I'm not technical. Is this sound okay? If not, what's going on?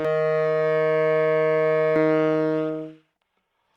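No. From the start to about 1.96 s there is a channel delay (doubling). One side of the stereo arrives about 46 ms late, which fits a 2048-sample buffer, so each sound is heard twice. Unlike room echo, the repeat is single and equally loud, with no fading tail.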